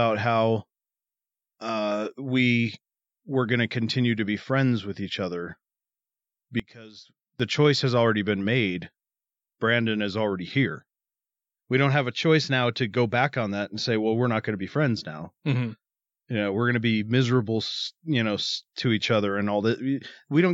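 A speech recording in which, from 6.60 to 7.40 s, one stereo channel has likely been inverted in polarity, so when the two channels are combined the content they share cancels instead of adding. For those 0.8 s the centred speech collapses by about 21 dB, leaving only the small difference between left and right: a faint residue, before the full level returns at 7.40 s.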